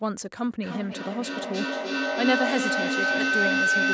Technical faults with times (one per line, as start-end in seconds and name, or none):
0.60-3.94 feedback howl